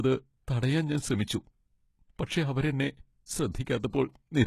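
All the way through, the treble sounds synthetic, with gritty, lispy s sounds and nothing above 12.3 kHz, likely HE-AAC compression at a low bitrate, around 16 kbps. Then come pre-echo smears: short hiss ahead of attacks at 3.52–3.55 s, 3.65 s, 3.80–3.84 s and 3.90–3.93 s, where block-spread quantisation noise leaks before each onset.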